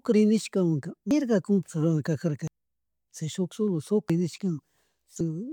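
At 1.11, 2.48, 4.10 and 5.21 s the speech skips ahead, losing roughly 0.1 to 0.3 s with no silent gap, unlike an underrun. The likely cause is a dropped buffer (overrun).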